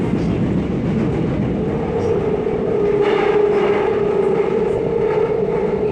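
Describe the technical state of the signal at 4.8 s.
At 4.8 s the audio sits inside a burst of DAB burbling from 4.77 to 4.87 s: uncorrected bit errors corrupt sub-band samples and scale factors, producing short blips of noise in single sub-bands across 8 frames. Underneath, the dull, gurgling, granular texture persists throughout, likely from MP2 compression starving upper sub-bands of bits, which fits a rate around 80 kbps.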